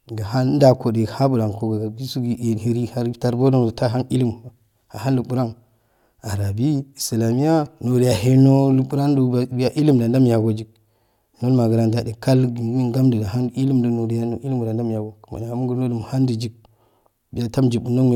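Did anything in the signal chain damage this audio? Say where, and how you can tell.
No, nothing audible in this speech recording points to damage at any stage of the signal chain, from capture through to playback.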